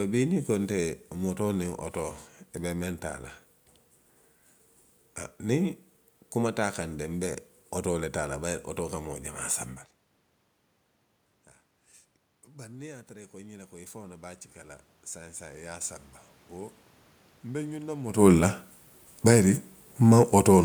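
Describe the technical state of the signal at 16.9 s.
At 16.9 s you're in the middle of an automatic gain rising stretch, running from 12.48 to 18.04 s. The input fell by about 22 dB, so the AGC slowly pushes its gain up by about 11 dB, and the voice and the room noise swell up together.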